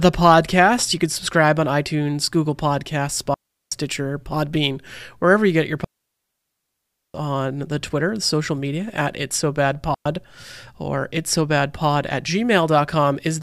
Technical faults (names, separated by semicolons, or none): digital wireless dropout